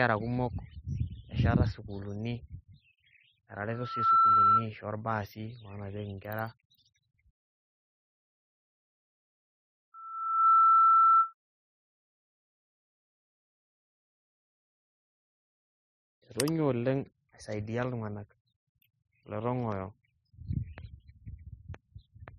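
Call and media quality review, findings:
Loudspeaker feedback squeal, 3.70–4.67 s: single 1.3 kHz tone swells over under half a second to roughly 10 dB above the speech. Open mic picking up its own loudspeaker; loop gain above unity at 1.3 kHz.

Repeat at 9.94–11.33 s, same 1.3 kHz tone, slower swell of about half a second, peaking roughly 15 dB over speech. Suspect mic/speaker placement or missing feedback suppression/notch.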